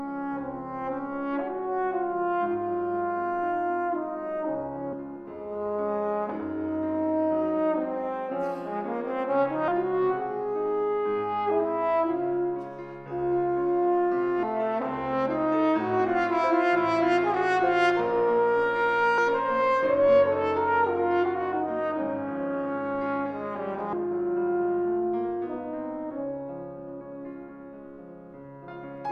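A recorder or processor working in 5-second chunks is likely dropping a short stretch each time it closes one chunk and opens the next, which is audio missing between chunks. The sound on either side is butted together with no gap, so at 9.68, 19.18, 23.93 and 28.68 s it skips abruptly forward, losing about a third of a second each time, with the later jumps recurring at a steady spacing of just under five seconds.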